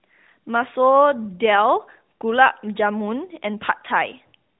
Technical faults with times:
none

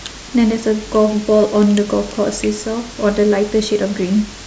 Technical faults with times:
none

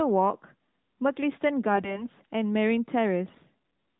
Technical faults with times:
3.28-3.44 AMR bit errors

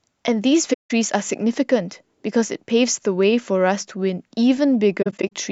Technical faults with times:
0.73-0.91 AAC frame loss with muting
5.02-5.32 AAC frame loss with muting

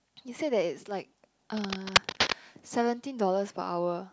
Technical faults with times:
1.57-2.33 cable scratch noise

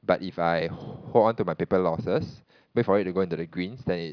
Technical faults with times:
none

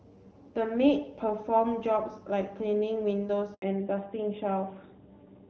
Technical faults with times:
3.54-3.62 handover gap
3.62-5.50 fallback to narrowband

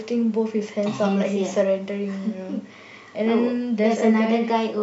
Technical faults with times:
none

